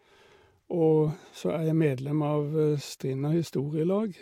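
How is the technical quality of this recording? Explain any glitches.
Two short glitches mar the speech. Both are corrupt frames decoded. Flipped bits made the decoder misplace energy across frequencies. A brief glitch comes at 1.07 s, and a slightly louder one at 3.46 to 3.50 s.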